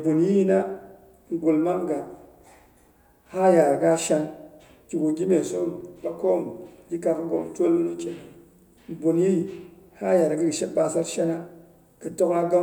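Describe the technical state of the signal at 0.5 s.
At 0.5 s the speech signal is intact, with no audible technical fault.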